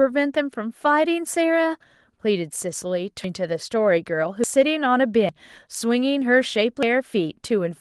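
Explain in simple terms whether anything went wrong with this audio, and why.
Something did go wrong. At 3.24, 4.44, 5.29 and 6.83 seconds the speech jumps forward. Each time, a short stretch, roughly a sixth of a second, is simply missing, and the speech on either side is stitched straight together. There is no gap of silence. This is most likely a dropped buffer (overrun): the recording program fell behind, and the sound card wrote over audio before it was saved.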